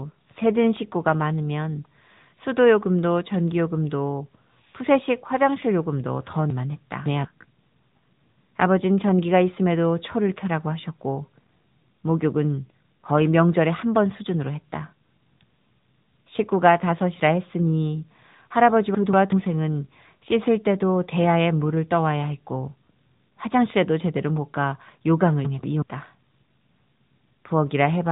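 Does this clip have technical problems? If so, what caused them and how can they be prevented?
Yes. The speech has a thin, boxed-in tone with nothing above 3.8 kHz, and the plainly audible buzzy, synthetic edge on vowels and consonants is AMR narrowband mobile codec damage. AMR-NB discards the upper band and rebuilds the voice from a vocal-tract model fed by sparse pulses, so detail is lost. The level of damage points to a mid-rate mode near 10 kbps. To prevent it, capture or route the call over a wideband path or a higher-rate codec.

At 6.50 to 7.25 s and again at 25.45 to 25.82 s the sound briefly jumbles. These are chunks out of order: segments of about 186 ms played after the ones meant to follow them. The first passage fits a chunk held back by three places, and the second fits a chunk held back by one. Nothing is missing, but the sequence breaks. To prevent it, reorder chunks by sequence number or timestamp in the jitter buffer before playback or writing.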